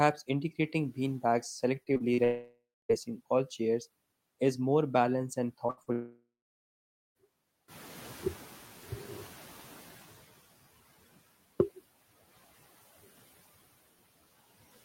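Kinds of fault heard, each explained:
repeated packet loss (robotic sound): Packets failed to arrive four times in quick succession between 1.83 and 2.20 s. Each gap, the longest 41 ms, was patched by extending the last sound, so about 100 ms goes missing and the stretch turns choppy and mechanical.
long network dropout: A lengthy interruption in incoming audio, likely a network outage, leaves stretches unplayed at 2.24–2.91 s and 5.92–7.17 s. The final sound is extended as a fading buzz or hiss, then near-silence follows for roughly a quarter second and nearly a second respectively.
short concealed packet loss: Small chunks of audio, about 20 ms at 5.67 s and 40 ms at 5.83 s, missed the decoder. The receiver bridged each hole by continuing the preceding sound and blending back, leaving a brief smear or wobble.
burst of packet loss: Several consecutive packets were lost between 5.70 and 5.79 s, about 60 ms of audio. 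The receiver held the last sound and let it fade across the gap, so a short buzz or hiss replaces what was lost before the audio resumes.
noise suppressor catching up: Background room noise jumps by about 11 dB near 7.5 s, and the suppressor's noise estimate lags. The noise comes through with less reduction at first, then sinks by about 12 dB as the estimate adapts over roughly 2.6 s, settling by 10.27 s.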